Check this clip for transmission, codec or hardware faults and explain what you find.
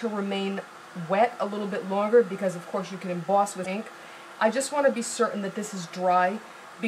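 One fault stands out: damaged data in the compressed stream, from 3.62 to 3.66 s. Corrupted bytes make the decoder misread frames and lose sync, producing a brief glitch lasting about 40 ms. A spectrogram shows a short disturbance, and the waveform shows an abrupt discontinuity.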